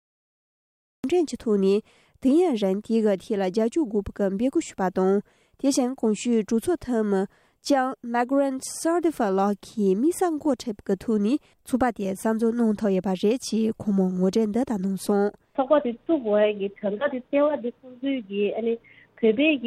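The clip opens with a cut-off start. From 0 to 1.04 s there is only digital silence. At 1.04 s the sound appears abruptly, already in progress. Capture began late, after the sound source was active. There is no natural attack and no fade-in. The onset was never recorded. Instead, the level jumps from nothing to full in an instant. The ear hears a hard edge where the audio should have begun.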